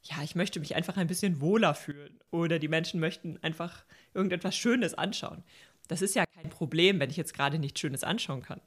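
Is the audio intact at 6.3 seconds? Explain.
No, not quite. There's a sudden gain jump from 6.25 to 6.44 s, where the speech and its background noise both drop by about 24 dB in a single step. Most likely a gain setting got applied with no ramp, so the level changes instantly rather than fading.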